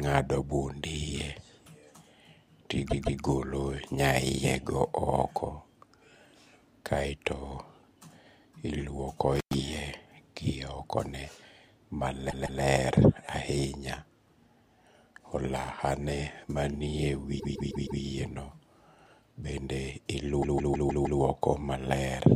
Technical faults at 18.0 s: repeated frames

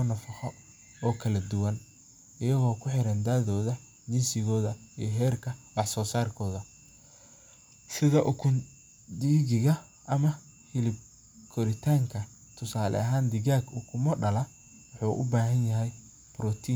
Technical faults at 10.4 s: none

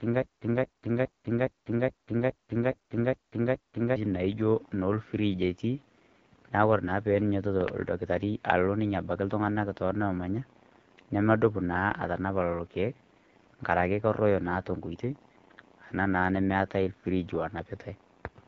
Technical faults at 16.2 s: AMR wideband (HD Voice) codec

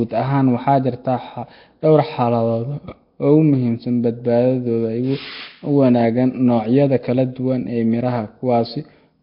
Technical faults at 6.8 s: Nellymoser compression

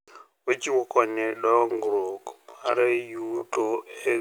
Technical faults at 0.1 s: none

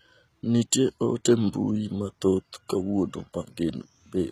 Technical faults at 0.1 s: HE-AAC compression

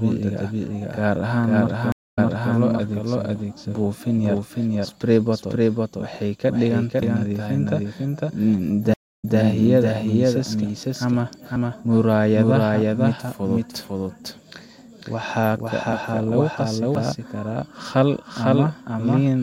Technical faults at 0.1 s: doubled audio track

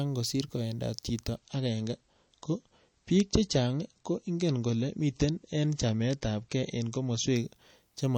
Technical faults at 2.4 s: adaptive stream at a lower bitrate

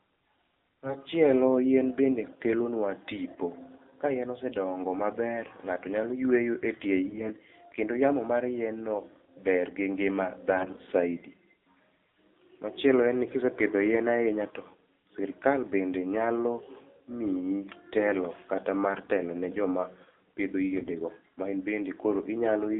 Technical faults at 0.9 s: AMR narrowband mobile codec; AMR bit errors

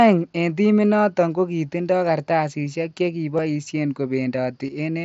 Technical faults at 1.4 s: none

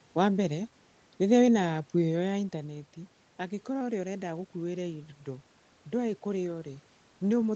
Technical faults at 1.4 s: none

